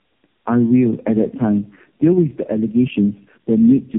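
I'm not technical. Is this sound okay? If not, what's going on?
No. Throughout the clip there is gain pumping: loud and soft parts end up closer in level and the sound is squashed, likely from gain set too high with a fast limiter pulling it back. There is also tandem speech coding: the speech passed through three mobile-phone speech coders in a row, each degrading the last, so it sounds rough, muffled and warbly, with nothing above 3.8 kHz.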